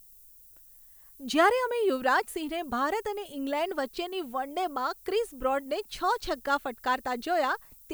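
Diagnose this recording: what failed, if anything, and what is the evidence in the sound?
Sample-format conversion is the culprit: low bit depth with noise shaping. A thin, steady hiss runs under the speech for the whole clip, rising sharply toward the top of the band and sitting only about 25 dB down. It sounds like a 9-bit requantisation whose rounding error was pushed upward by noise shaping.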